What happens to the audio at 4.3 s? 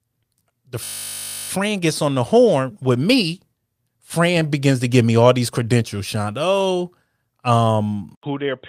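Nothing goes wrong at 4.3 s; the speech carries on intact through that moment with no dropout, click, glitch or other fault.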